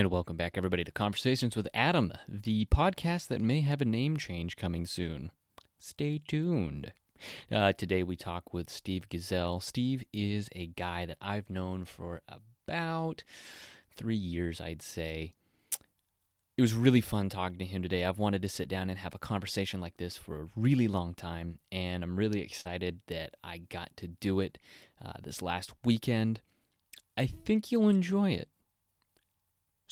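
Speech, hit by two bursts of network packet loss. Lost packets were rebuilt from error correction from 11.09 to 11.15 s and from 11.21 to 11.27 s, just before "known for about," each spanning 40 ms, which fits two 20 ms packets. Low-bitrate redundant copies carried in later packets stood in for the lost ones, so nothing drops out, but those stretches sound rougher and noisier. Short concealed packet loss falls between them, 11.17 to 11.21 s, and again from 22.61 to 22.67 s, after "time and I'm really" and before "that I got to." There audio never arrived in time, about 20 ms and then 40 ms, so the decoder extended the preceding sound and blended back into the real audio, heard as a brief smear or wobble. The last 20 ms of that second gap, 22.65 to 22.67 s, was again rebuilt from error correction.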